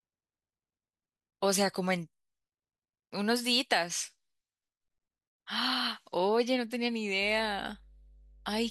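A steady low drone at 50 Hz enters this speech recording at 7.23 s and holds to the end at 8.70 s, sitting roughly 25 dB below the speech. It is mains hum, where power-line current leaks into the signal through a ground loop or nearby transformer.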